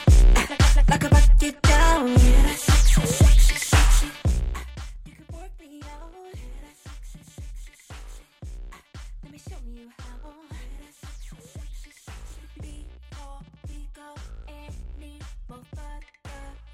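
From 3.95 to 5.0 s the level drops by roughly 25 dB in audible 2 dB steps, around fifteen per second, causing zipper noise: each unsmoothed jump leaves a small click, so a fast ticking rides on the sound while it fades, unlike a smooth, silent fader move.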